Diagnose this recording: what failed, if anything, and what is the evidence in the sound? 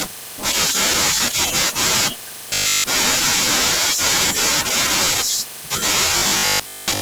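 Robotic sound from repeated short buffers appears twice, from 2.50 to 2.88 s and from 6.18 s to the end of the clip. In both stretches the speech becomes a rigid, metallic buzz fixed at 50 Hz that only loosely follows the speech. A 50 Hz buzz implies a 20 ms block being replayed, pointing to the driver or buffer stage. The likely cause is input arriving too slowly, with the software looping the last block while most of the real audio is skipped.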